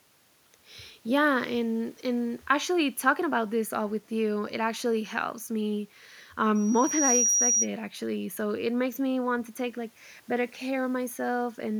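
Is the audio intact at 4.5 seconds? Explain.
Yes, the speech at 4.5 s plays through intact, with no dropout, click, distortion or other fault at that moment.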